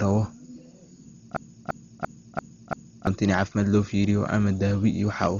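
Hard clipping runs through the whole clip. The speech reaches the stage about 8 dB hotter than it can pass, so peak samples are cut flat at the ceiling. Only a small fraction of samples go over, so the damage is crackle and a brittle edge on the loudest syllables rather than constant fuzz. Each squared-off peak throws harmonics high into the spectrum, which is why the crackle sounds brittle.

A dull, band-limited sound also persists from start to finish. It is most likely Dolby Digital compression at a very low bitrate, around 32 kbps. Nothing survives above 6.9 kHz, so the speech sounds muffled. With so few bits, many frequency lines inside the remaining band get no real detail and are filled with noise on decoding. That leaves a rough, fluttering grain wrapped around the voiced sounds.

A system hang loop runs from 1.37 s to 3.07 s. The machine stalled while the sound hardware kept replaying the same buffer. 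One 0.34 s slice of speech repeats exactly five times at about 2.93 Hz, which fits a 16384-sample buffer. It is heard as a slow, mechanical stutter of the same fragment. About a second and a half of the real audio is lost behind it.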